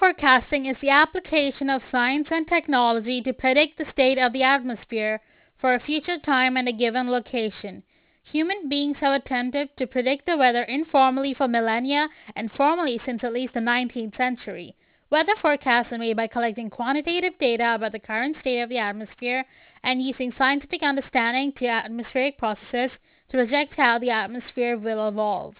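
From start to finish the speech carries aliasing. It was resampled down without an anti-aliasing filter, which fits a drop to an 8 kHz rate, so energy above 4 kHz folds back below it. Sibilants turn gritty and metallic, with spurious tones only about 15 dB under the speech. A clean band limit would just sound dull. Here the spectrum stays full right up to 4 kHz and is crowded with unrelated pitches.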